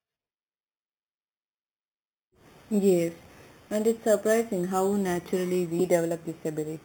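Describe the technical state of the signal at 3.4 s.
At 3.4 s, as throughout, there is imaging from sample-and-hold upsampling. Repeated samples mirror the spectrum into 4 to 8 kHz at about -19 dB. It sounds like a metallic fizz that tracks the speech and moves against the pitch, unlike steady hiss.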